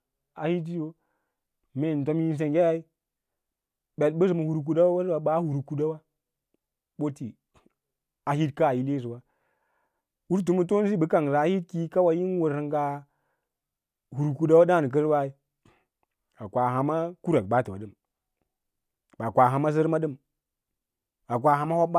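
Nothing stood out as a technical problem on listening to this speech recording.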